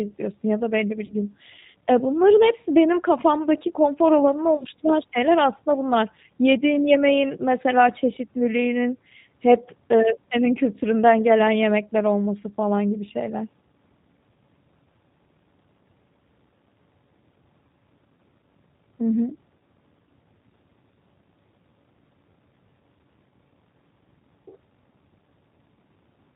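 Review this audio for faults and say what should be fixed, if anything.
The whole speech recording carries plainly audible G.729 codec damage: a slightly rough, synthetic edge. That sound fits an 8 kbit/s codec that rebuilds each 10 ms frame from a vocal tract filter, a pitch predictor and a few pulses. On a spectrogram, energy stops abruptly at 4 kHz, and harmonics look smeared and grainy. To prevent it, use a wideband codec such as Opus or G.722 for capture and transmission.

VoIP packet loss concealed by the speech codec appears twice. From 1.06 to 1.15 s, right after "ya da belli bir", the sound is stretched and fades, which fits about three lost 10 ms frames. From 4.57 to 4.67 s, after "benim kafamdaki konfor alanını" and before "şeyler aslında bunlar", losses scattered over 80 ms, with runs of at most 20 ms, leave the voice weak or distorted. Each time, the decoder repeats its last pitch and filter while lowering the gain, and recovery is slow because each frame builds on the one before. 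On a spectrogram, these spots look like flat, repeated harmonic bands fading out. The waveform shows a decaying, periodic stretch. To prevent it, add a jitter buffer with forward error correction, or improve network reliability.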